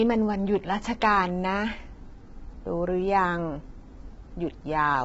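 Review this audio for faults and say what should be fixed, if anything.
The speech sounds rough and grainy from start to finish, with noise filling the gaps between harmonics and nothing above about 7.7 kHz. This is likely low-delay AAC compression (AAC-ELD), whose short frames resolve pitch poorly and which points to a starved bitrate around 16 kbps. Raising the encoder bitrate or using a longer-frame codec where latency allows would prevent it.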